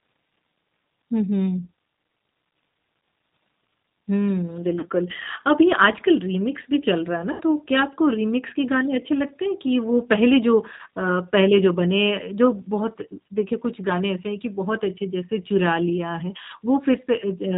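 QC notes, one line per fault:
throughout: G.729 codec. The speech has the narrow, slightly rough and synthetic quality of a low-rate CELP coder at 8 kbit/s, and the damage is plainly audible. Nothing above 4 kHz survives, so sibilants lose their edge. Each short frame is rebuilt from a vocal tract filter, a pitch predictor and a handful of pulses rather than the actual waveform, which gives the voice a rough, processed texture.
4.79–4.87 s, 7.32–7.41 s and 10.77–10.81 s: VoIP packet loss concealed by the speech codec. About 40 ms, 80 ms and 20 ms of audio are missing, which fits two, four and one lost packets. The decoder fills each gap by repeating its last pitch and filter at falling gain, so the voice smears into a fading buzzy tone or coloured noise. The longest gap is at 7.32 s, and the voice stays weak briefly after each gap while the decoder recovers.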